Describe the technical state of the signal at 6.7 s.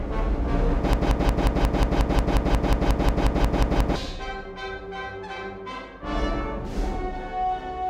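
At 6.7 s the music plays through intact, with no dropout, distortion or other fault audible at that moment.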